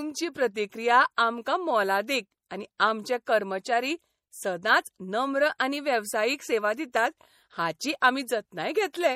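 MP3 compression, likely, runs from start to end: nothing sounds above 16.2 kHz, and the plainly audible codec damage fits a low bitrate around 48 kbps, where weak frequency lines are dropped and return frame by frame, leaving the speech watery or swirly with smeared attacks.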